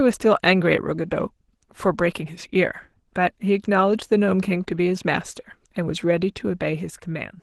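Opus voice compression colours the speech from start to finish. The low band is coded by linear prediction, with a coarse transform layer above 8 kHz. The excitation is thin, so the voice sounds hoarse and slightly robotic, which fits a bitrate around 16 kbps.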